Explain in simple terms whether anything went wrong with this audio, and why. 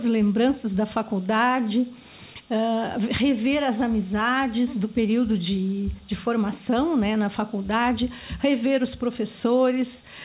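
Nothing went wrong with this audio; it came over a phone-style call connection, and the lack of any sound above about 4 kHz is normal for that kind of line.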